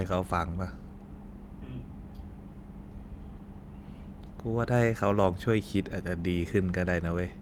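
No technical faults can be heard anywhere in the speech recording.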